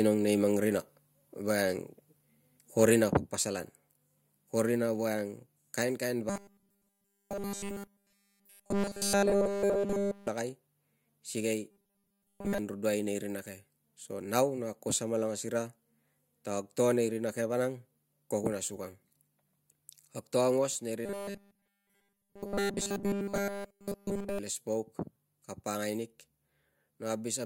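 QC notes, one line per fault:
2.82–2.89 s, microphone overload: The loudest peak just before "rina paspasalan" is flattened at the top and gains a harsh, crackling edge. It is pushed about 4 dB past the converter's ceiling, and a small share of samples, around 2 percent, is cut off. The likely cause is an input volume set too high, so the waveform hits the converter's limit and its tips are sliced away.
3.12 s and 20.67 s, microphone volume stepped down: The whole signal, voice and background together, drops at once. It falls about 4 dB at 3.12 s and about 2 dB at 20.67 s. Each drop is a single step with no gradual fade. The first comes just after the overloaded peak at 2.82 s. This is likely the call software reacting to a hot input by cutting the device's input volume in one move.
6.30–10.28 s, 11.71–12.58 s and 21.06–24.39 s, robotic sound from repeated short buffers: The sound turns into a rigid metallic buzz at a fixed 200 Hz that only loosely follows the speech. 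The first run starts right after "ko rina voiang kainkain", and the second ends just before "angruduai nei rina ke". Nearly all the audio in these spans is repeated material. A 200 Hz buzz fits a block about 5 ms long being looped, likely because fresh audio arrives too rarely and the last buffer is replayed to fill the gap.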